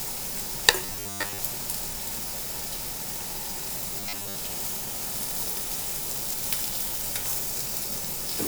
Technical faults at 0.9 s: robotic sound from repeated short buffers

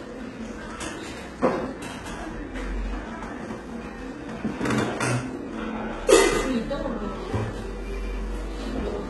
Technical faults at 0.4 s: HE-AAC compression

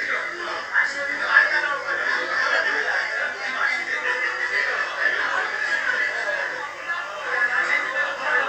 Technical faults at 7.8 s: channel delay (comb filtering)

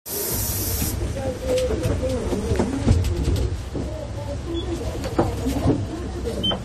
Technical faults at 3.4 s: transcoding between lossy codecs

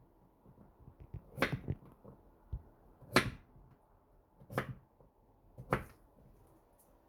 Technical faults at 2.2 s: none

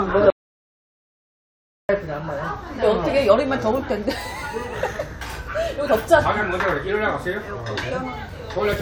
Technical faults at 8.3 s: overlap between stream segments

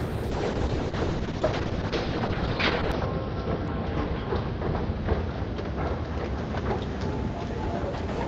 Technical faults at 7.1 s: call bitrate drop

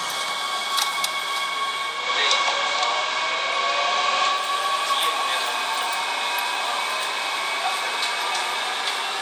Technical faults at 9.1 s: none

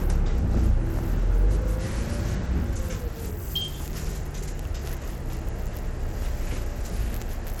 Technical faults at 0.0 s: Bluetooth SBC compression

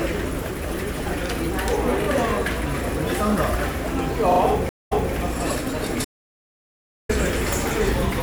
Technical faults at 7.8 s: none

